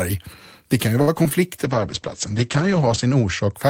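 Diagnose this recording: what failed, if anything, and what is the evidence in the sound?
Network stage: repeated packet loss (robotic sound) from 1.01 to 1.32 s. Four gaps, the longest about 62 ms, are patched by extending the preceding sound, so about a third of that stretch is concealed. The speech turns choppy, with fragments missing.

Codec stage, driven by network bandwidth estimation: a call bitrate drop from 1.65 to 3.6 s. The Opus encoder falls from 32 to 9 kbps, staying at the lowest rate for 1.38 s. Audio bandwidth narrows from 20 kHz to 8 kHz, leaving the speech muffled and coarsely coded.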